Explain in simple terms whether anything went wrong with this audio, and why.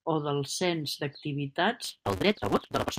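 From 1.84 s to the end, there is a block size mismatch (truncated): one stage hands over longer chunks than the next one takes, which fits 256-sample reads, so each chunk's tail is dropped. The speech runs about 1.88 times faster at near-normal pitch, with a 188 Hz buzz.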